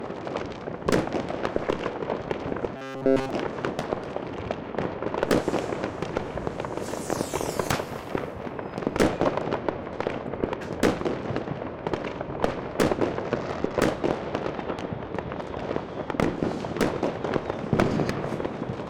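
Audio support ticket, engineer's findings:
Robotic sound from repeated short buffers, 2.77–3.31 s. Rigid metallic buzz at 134 Hz. Likely cause: playback starved, repeating a roughly 7.5 ms chunk across most of the span, skipping real audio. Differs from comb filtering: content is replaced rather than colored, and the buzz rate stays fixed regardless of input.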